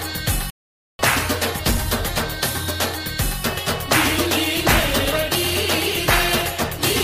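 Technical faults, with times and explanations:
0.50 to 0.99 s, playback stall: the sound just drops out for about half a second, then picks up again. That reads like the player starving or getting its thread blocked, likely, and sitting silent until data flowed back in.
1.63 s, 3.58 s and 5.11 s, compressed frames skipped: the audio jumps ahead each time, by about seven frames (roughly 150 ms) at 1.63 and 5.11 s and a single frame at 3.58 s, with frames around 23.2 ms long.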